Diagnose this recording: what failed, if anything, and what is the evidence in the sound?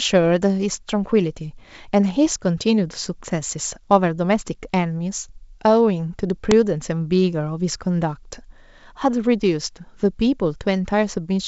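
Buffer stage: an uninitialised buffer at 6.51 s plays stale memory as a loud 2.7 ms noise burst, fitting a 128-sample block, not a dropout's silence.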